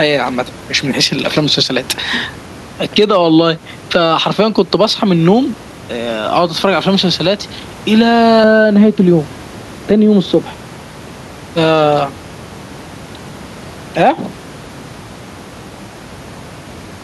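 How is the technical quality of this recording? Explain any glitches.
The technical quality is compromised by two faults, one running through the whole speech recording and one confined to a short stretch.

Gain pumping is present throughout. The room noise sits about 29 dB below the speech, and the gain swings by around 10 dB as it is pulled down under loud syllables, likely from excessive gain hitting a fast limiter.

De-emphasis applied wrongly affects 8.44 to 11.56 s. A treble cut was applied where no pre-emphasis existed, or was applied twice, sloping smoothly to about 11 dB down at 10 kHz. The result sounds muffled. The gradual slope distinguishes it from a sharp low-pass cutoff.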